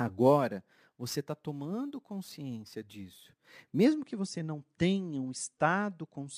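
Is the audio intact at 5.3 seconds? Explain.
Yes, the speech at 5.3 seconds plays through intact, with no dropout, click, distortion or other fault at that moment.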